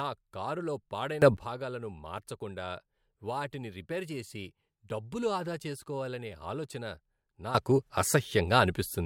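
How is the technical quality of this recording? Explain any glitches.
The recording has two sudden gain jumps. At 1.22 s the level leaps about 17 dB for roughly 0.15 s, and from 7.55 s to the end it jumps about 14 dB. Both likely come from a gain step applied instantly with no ramp, so the speech and background noise rise together, abruptly.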